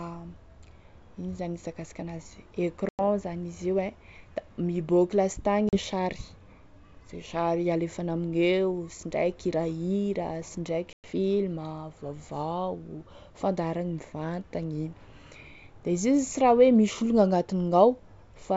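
At 2.89 to 3.01 s, 5.69 to 5.78 s (just after "da miboaky") and 10.93 to 11.05 s, the speech drops into hard-edged silence of about 100 ms, 40 ms and 110 ms: packet loss on an ADPCM call, some ten, a few and ten packets gone. Unlike a plain dropout, each resumption comes back with brief distortion, because the decoder's predictor and step size have drifted from the sender's, settling within tens of milliseconds into clean wideband G.722.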